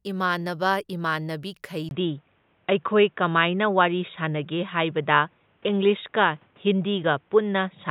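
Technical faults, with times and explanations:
1.89–7.91 s, input switched to a poorer device: right after "ꯏꯃꯥꯟꯅꯕ ꯏꯃꯥꯟꯅꯕꯤ" a 20 ms gap occurs, and the speech then turns dull and boxy, with nothing above 3.8 kHz, a level shift of roughly 5 dB and a new background hiss well below the speech. The likely cause is the recording changing to a narrower-band microphone. A simple filter or codec bandwidth drop would not bring the gap, the level step and the different noise floor.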